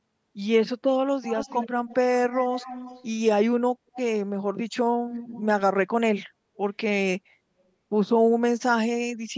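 Echo leak appears at 1.23–1.68, 1.88–1.96, 2.31–3.06, 3.95–4.0 and 5.13–5.46 s. A faint copy of the speech trails 277 ms behind, well below the speech, likely from a loudspeaker whose echo canceller let some residue through. On a spectrogram, weaker duplicate harmonics sit slightly to the right of the originals.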